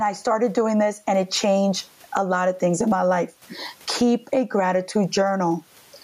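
Gain pumping runs through the whole speech clip. The level swings by roughly 15 dB. The room noise, about 45 dB below the speech, is part of the recording. The likely cause is excessive input gain driving a fast limiter. Loud and soft passages sound squashed together.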